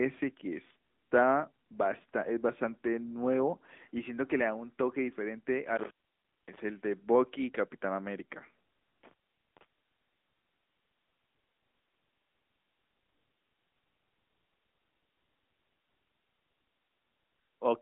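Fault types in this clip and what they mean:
AMR narrowband mobile codec: The speech passes through a phone-style vocal-tract model. Nothing above 3.8 kHz survives, and the line band sits near 200 Hz to 3.6 kHz. The damage is plainly audible as a buzzy, synthetic edge, which fits a rate near 10.2 kbps.
Intermittent contact: A loose connection opens briefly and the sound drops out, with crackle at each edge. It happens twice, from 5.76 to 6.6 s and from 9.03 to 9.65 s. The line stays open for about 570 ms and about 450 ms.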